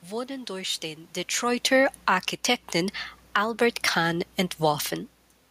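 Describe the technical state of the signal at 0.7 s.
At 0.7 s the signal is intact, with only the background noise of the room underneath the speech.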